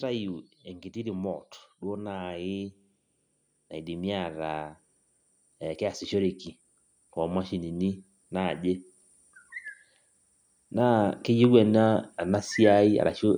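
From 10.49 s to 13.11 s, automatic gain rising lifts the level by about 5 dB, as the gain control judges the input too quiet. Speech and background noise swell together; the waveform envelope widens steadily, and the spectrogram brightens uniformly across all frequencies.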